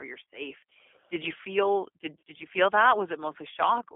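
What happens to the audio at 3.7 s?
G.729 codec damage is present at 3.7 s, as it is across the whole clip. The speech has been rebuilt from a coarse vocal tract filter, a pitch predictor and a handful of pulses per short frame, a sound that fits an 8 kbit/s G.729A coder. The band is held to roughly 300 Hz to 3.5 kHz, so the sound is thin and muffled, and the plainly audible coding leaves it rough, buzzy and faintly synthetic.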